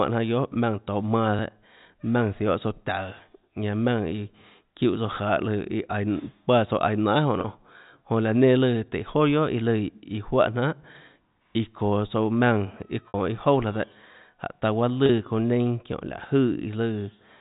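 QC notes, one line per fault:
1.39 s and 15.93 s, dropped buffer (overrun): a small jump forward in the sound, roughly 15 ms and a few ms lost, likely samples overwritten before being read.
7.41 s, 13.08 s and 15.06 s, packet loss with pitch repetition: the last pitch period repeats to fill each gap, so the 30 ms ones sound briefly held and buzzy. The 60 ms one at 13.08 s fades further before the cross-fade back. This fits one or two lost packets each time in the telephone-band G.711 stream.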